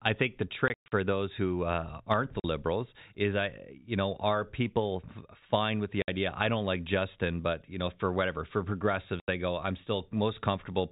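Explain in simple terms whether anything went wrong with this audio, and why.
Packet loss filled with silence: chunks of audio never arrived, and the receiver played nothing in their place. You hear sudden gaps after "I think the" (0.68–0.92 s), after "who uh aren't the" (2.4 s), at 6.02 s, and after "know for whatever for" (9.2 s).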